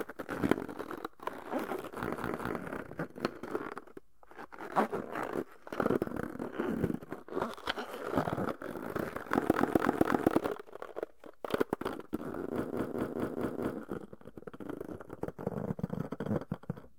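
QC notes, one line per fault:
2.13–2.56 s, 9.56–10.32 s, 12.67–13.74 s: repeated frames. The sound stutters, looping a short block. A block of about 0.21 s plays twice more, then one of 0.26 s three more times, then one of 0.21 s five more times, likely from a run of compressed frames being resent.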